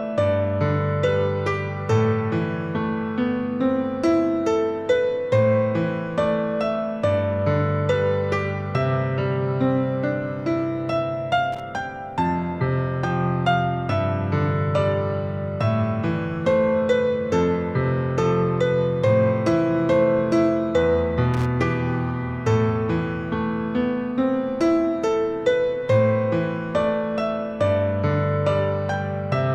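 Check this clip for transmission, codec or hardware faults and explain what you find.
Two brief bursts of loose connector crackle occur, at 11.52 to 11.60 s and 21.34 to 21.46 s. A worn contact intermittently breaks the signal, producing irregular scratchy crackle, visible as ragged spikes and broadband vertical streaks.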